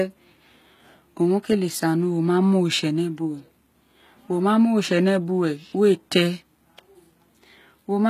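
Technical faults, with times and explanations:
Throughout: HE-AAC compression. The speech carries plainly audible codec damage: s sounds come out gritty and lispy, the upper treble has a metallic sheen, and nothing is present above 14.9 kHz. This is likely HE-AAC at a low bitrate, which fits something around 20 kbps. Only the lower spectrum is coded, and the treble is rebuilt by copying lower bands upward under a coarse envelope, so its harmonics fail to line up with the real ones.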